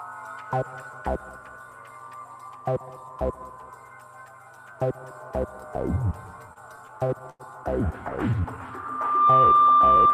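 From 6.53 to 7.42 s there are repeated stalls (stutter). Packets were reaching the receiver late or more slowly than they were being played, so the jitter buffer kept running dry. Each time, the receiver stretched the last bit of audio until fresh data arrived. Seven such gaps, totalling 169 ms and the longest 96 ms, fill about a fifth of that stretch. Nothing is lost, but the sound drags and hiccups.

From 8.68 s to the end, a loudspeaker feedback squeal takes over. The microphone picked up the loudspeaker it was feeding, and at 1.2 kHz the loop gain passed one, so that frequency reinforced itself on every pass. It is heard as a single steady tone that swells over roughly three-quarters of a second to sit around 10 dB above the rest of the sound, a piercing whistle that persists until the clip ends.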